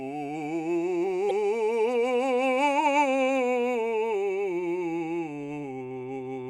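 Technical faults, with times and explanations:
1.27 to 1.31 s, damaged data in a compressed stream: a short stretch of the encoded music arrived corrupted, with bytes lost, zeroed or overwritten, so the decoder could not read those frames correctly and lost its place until it found the next valid frame header. For about 40 ms the output is disrupted, heard as a brief chirp, squawk, click or short hole cutting across the music before normal playback resumes.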